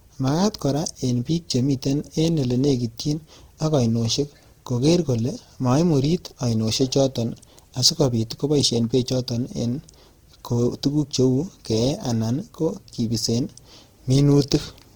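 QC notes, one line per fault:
Throughout, Opus compression: the speech has a rough, grainy texture, plainly audible the whole way. The top end still reaches about 20.4 kHz, so there's no muffling, just grit. That's the likely signature of Opus in its music mode, which fills bands starved of bits with noise or folded copies of lower bands. The damage fits a low rate of around 16 kbps.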